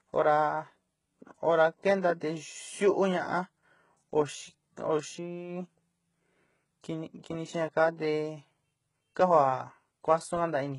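Right from the start and all the way through, the speech carries what's most likely HE-AAC compression, and heavy at that. The treble is rebuilt by copying lower bands upward rather than coded directly, so the top end is not the original, with its harmonics not lining up across the crossover. S sounds come out gritty, metallic and lispy. Nothing sits above about 11.1 kHz, which fits a very low bitrate, around 12 kbps.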